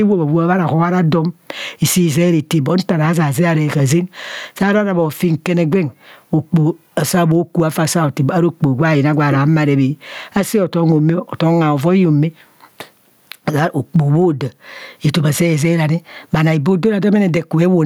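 Speech recorded with gain pumping running through the whole clip. Loud and quiet syllables sit unnaturally close in level, leaving the delivery squashed and flat, with the gain swinging by something like 15 dB. The likely cause is a microphone preamp set far too hot, with a fast limiter or compressor clamping down on each loud sound and releasing in the gaps.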